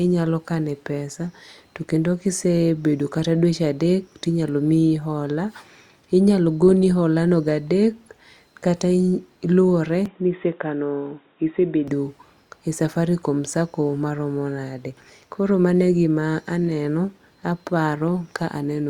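From 10.06 to 11.88 s the input likely switched to a poorer device, cutting everything above 3.8 kHz, so the speech turns dull and boxy without a gap or level jump.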